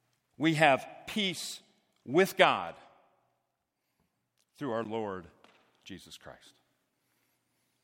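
At 4.84 s, just after "through our", a block of digital silence about 12 ms long cuts in. Its length fits a 512-sample buffer left unfilled. The hard edges give a tick, seen as a near-flat line on the waveform and a blank spectrogram column flanked by broadband clicks.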